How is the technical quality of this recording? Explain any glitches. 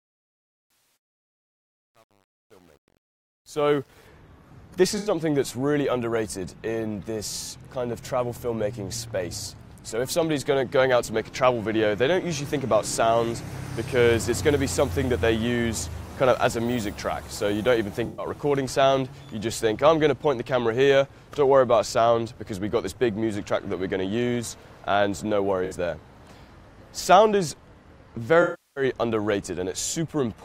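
The recording has two kinds of glitch, one at the start and five short dropouts spread through the audio.

From 0.0 to 4.08 s, the opening fade-in sounds gritty, worst up to about 3.7 s. This is truncation distortion on a fade. The gain stage keeps only about 9 bits with no dither, so the quiet waveform collapses into coarse square steps.

At 0.68 to 0.96 s, 4.97 to 5.10 s, 18.05 to 18.26 s, 25.65 to 25.73 s and 28.42 to 28.84 s, the sound turns smeared and noisy. This is AAC frame loss with concealment. The gaps run from 64 ms to 341 ms, and the decoder fills each one by guessing from the last good spectrum.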